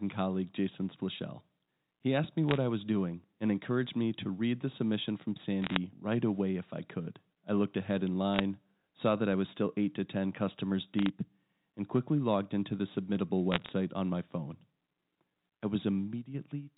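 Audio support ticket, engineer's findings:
Bit errors on a digital phone line, G.711 mu-law path: flipped bits each corrupt a single 8-bit sample, and hits on sign or high bits throw sharp spikes. Heard as bursts of ticking crackle over intact speech at 2.49–2.57 s (before "I was doing and"), 5.62–5.77 s (after "read the submission from", before "right away if I"), 8.34–8.40 s (after "I looked ahead in"), 10.99–11.09 s and 13.52–13.69 s. The density points to an error rate of a few tenths of a percent. Band limit below 4 kHz consistent with the line.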